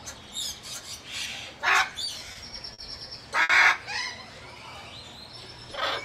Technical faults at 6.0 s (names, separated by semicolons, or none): none